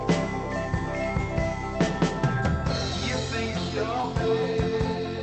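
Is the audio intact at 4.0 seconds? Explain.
No, there's a short concealed packet loss from about 4.01 to 4.05 s. Roughly 20 ms of audio never arrived, so the receiver stretched the preceding sound to cover the gap and then blended back in, leaving a brief smear or wobble.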